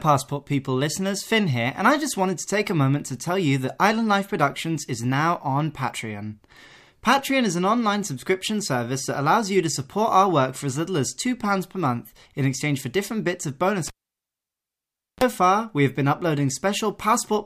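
At 13.87 s the cable is pulled and plugged in: a pop, 1.31 s of near silence, a 34 ms burst of 60 Hz mains buzz, then a pop at 15.24 s.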